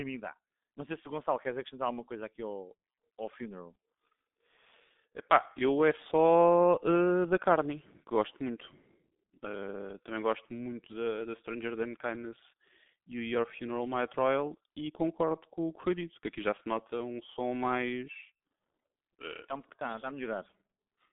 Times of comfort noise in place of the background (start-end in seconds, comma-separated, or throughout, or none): none